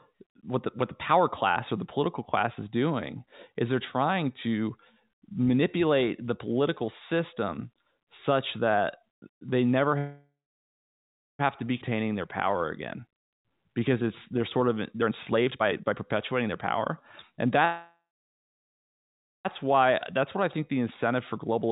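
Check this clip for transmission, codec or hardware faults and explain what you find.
The clip has several transmission faults, all from network timing rather than hardware. The speech is band-limited, with nothing above 4 kHz, which fits a narrowband G.711 mu-law call path.

Call audio freeze appears twice, from 9.98 to 11.41 s and from 17.65 to 19.47 s. Packets were likely held up, and the jitter buffer ran dry. The last sound trails off into silence lasting about 1.08 s and then 1.44 s. The speech then resumes where it stopped, with nothing lost.

A skip ahead follows at 11.81 to 11.83 s. About a second of speech is dropped to clear the delay built up by the first freeze. The two sides are spliced almost directly, so the speech jumps forward with no real gap.

A jitter buffer slow-down runs from 11.90 to 14.98 s. The receiver repeats single pitch periods to rebuild its reserve, adding 198 ms. 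Speech plays at 94% speed at unchanged pitch. Sounds are slightly drawn out.

Jitter buffer speed-up runs from 15.01 to 17.46 s at 120% speed, removing roughly half a second. A milder pass at 106% runs from 21.15 to 21.69 s. Short pitch-period slices are cut to shrink the delay, so speech sounds hurried at normal pitch.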